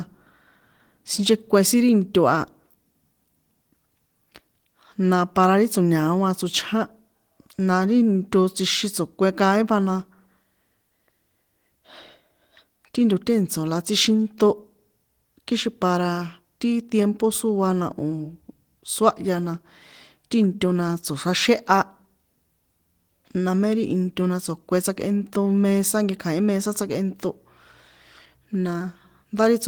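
No technical faults can be heard in this speech recording. The Opus voice compression keeps the full band, with content reaching about 20.2 kHz and only light coding traces, which fits its hybrid mode at around 20 kbps.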